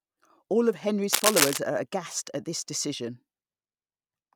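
From 1.13 to 1.58 s, a scratchy, rustling burst sits about 5 dB louder than the speech: cable scratch noise, likely a worn connector being moved.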